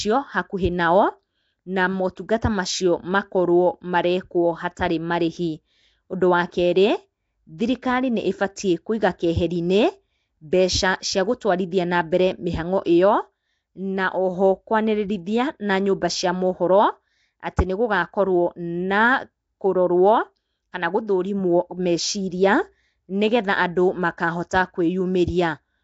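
Across the whole speech clip runs a rough, hissy halo with a smeared, underwater quality, likely Nellymoser compression. Its fixed small bit budget, fitting about 32 kbps, leaves weak bands noise-filled. On a spectrogram, grainy speckled fill sits between harmonics and everything stops sharply at 7.8 kHz.

Pre-echo appears at 2.16 s, 11.71 s and 24.49 s. A short hiss arrives 15, 12 and 16 ms before a sharp attack, which sounds softened. This happens because the codec spreads noise across its block, filling the quiet moment ahead of the onset. The waveform shows a low noise smear before each transient, and the spectrogram shows a broadband haze leading it.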